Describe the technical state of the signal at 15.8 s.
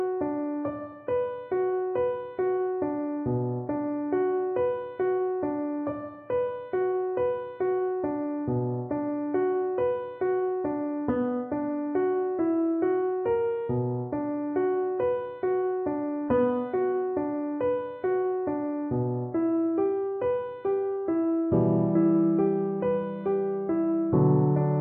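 At 15.8 s the signal is intact, with no audible dropout, click, distortion or other technical fault at that moment.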